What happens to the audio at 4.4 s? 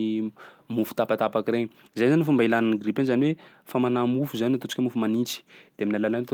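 At 4.4 s the speech carries on without any audible fault: no dropout, click, distortion or level jump interrupts the sound at that point.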